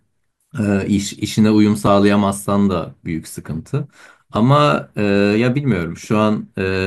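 Audio missing between chunks at 1.87 s and again at 4.36 s: the speech skips abruptly, losing a few milliseconds with no gap of silence. The events sit 2.5 s apart, which points to a recorder or processor likely dropping audio at each chunk handover.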